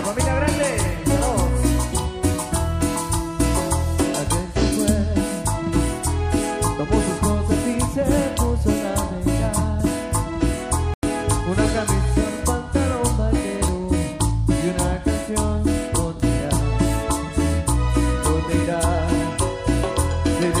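At 9.80 s a brief disturbance peaks at about -15 dBFS. This is a corrupt FLAC frame: flipped bits passed unchecked, so the decoder predicted from wrong values from the damaged bit on.

From 10.94 to 11.03 s the sound drops abruptly into silence for about 96 ms. This is a corrupt frame muted: the decoder rejected damaged compressed frames, and the player filled their place with silence.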